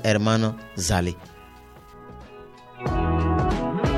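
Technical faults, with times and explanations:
1.94 to 3.97 s: de-emphasis applied wrongly. From about 1.94 s the treble falls away smoothly, down by about 11 dB at 10 kHz relative to 1 kHz. A high-frequency cut meant to reverse pre-emphasis met audio without it, or was applied twice. The result sounds dull and muffled.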